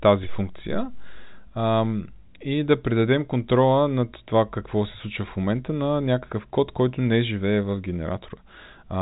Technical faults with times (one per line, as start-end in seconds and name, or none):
none